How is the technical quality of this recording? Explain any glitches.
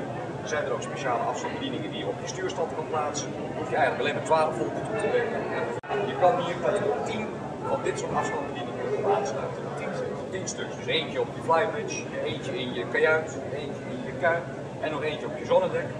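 No technical glitches can be heard in this recording. The sound continues without any interruption or audible defect.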